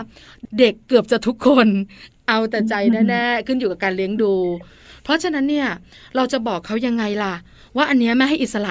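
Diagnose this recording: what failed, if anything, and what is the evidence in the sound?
Nothing in this recording points to a failure at any stage of the chain. No event in the sound calls for a diagnosis.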